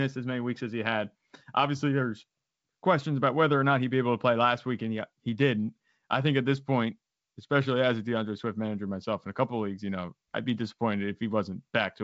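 No faults can be heard.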